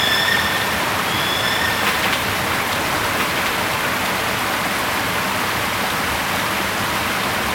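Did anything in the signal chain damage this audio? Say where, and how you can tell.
Yes. The audio carries a doubled audio track throughout. A second full-band copy trails the original by about one and a half seconds, around 5 dB quieter, with no decay or room colour. The likely cause is a slower second capture path or an editing stage mixing two out-of-step copies.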